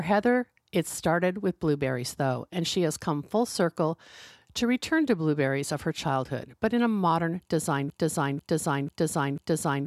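Right after "in a modern design", at 7.9 s, the speech locks into a broken-record loop: a fragment about 0.49 s long plays four times back to back, identically, and the loop runs to the very end of the clip. Whatever should have been said in those closing seconds never arrives. The likely cause is a stall in the player, encoder or stream, which kept resending the last half-second it had buffered instead of new audio.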